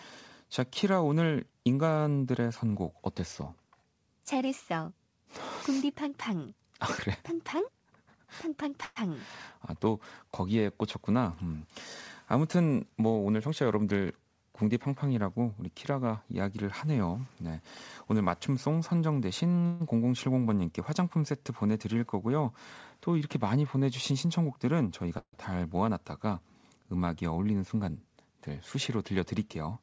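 At 8.84 s the speech stalls for about 0.12 s. The last sound is held as a fading buzz, and then the speech resumes exactly where it left off. This is a call audio freeze, most likely packets delayed long enough to drain the jitter buffer. On a spectrogram the harmonics run on as flat, smeared bands that dim away. In the waveform the cycles repeat with shrinking amplitude instead of following the speech. The same freeze recurs at 19.66 s, lasting about 0.14 s.

From 13.13 to 14.06 s the speech runs about 12% fast at unchanged pitch, so the delivery sounds briefly hurried. This is a jitter buffer speed-up: the receiver trimmed its backlog by cutting out one or a few pitch periods at a time again and again, roughly a tenth of a second in all. Harmonic spacing on the spectrogram stays the same while syllables and formant movements are compressed in time. The waveform shows slightly shortened stretches with tiny splice points at cycle boundaries. 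A second speed-up, about 10% faster, runs from 24.11 to 25.18 s.

Immediately after it, at 25.19 s, comes another freeze of about 0.14 s. Its filler fades completely, leaving roughly 80 ms of dead silence before the speech continues. That shows as a fading smear on the spectrogram and then a blank column, and the waveform drops to a flat line.

Throughout, the band stops sharply at 8 kHz, which fits the G.722 codec on the call path.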